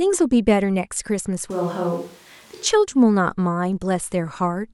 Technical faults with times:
1.51-2.66 switch to a distant microphone

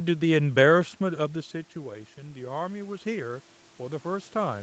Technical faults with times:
1.00-4.63 automatic gain rising

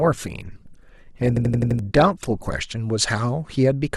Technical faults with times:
0.00-2.50 adaptive stream starting at a low bitrate
1.37-1.79 system hang loop

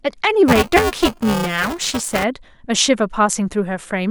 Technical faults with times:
0.48-2.24 buffer tearing

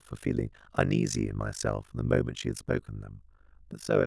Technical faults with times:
0.00-4.07 overlap-add ripple

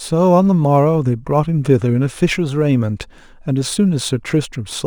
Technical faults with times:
0.00-4.86 sample clock jitter

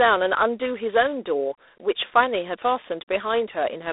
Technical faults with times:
0.00-3.92 G.726 ADPCM

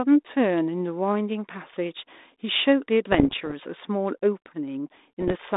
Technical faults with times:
3.12-3.53 bit errors on an ADPCM link
5.20-5.37 bit errors on an ADPCM link

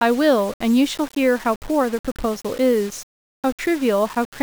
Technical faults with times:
0.00-4.43 low bit depth without dither

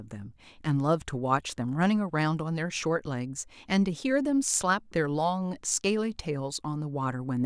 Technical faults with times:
none

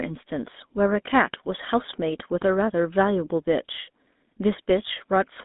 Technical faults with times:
0.00-5.45 GSM full-rate codec

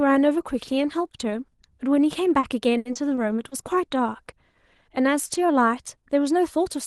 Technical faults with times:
2.39-3.53 repeated packet loss (robotic sound)

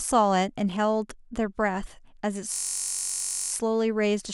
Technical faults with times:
2.54-3.52 system hang loop

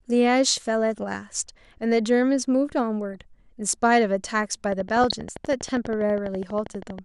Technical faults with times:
0.00-7.04 MP2 compression
3.13-3.20 DAB burbling
4.72-6.99 train of clicks
4.98-5.11 DAB burbling

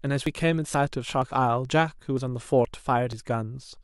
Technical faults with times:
0.26 audio missing between chunks
0.74 audio missing between chunks
1.22 audio missing between chunks
1.69 audio missing between chunks
2.17 audio missing between chunks
2.65 audio missing between chunks
3.13 audio missing between chunks

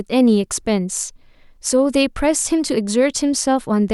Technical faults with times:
none

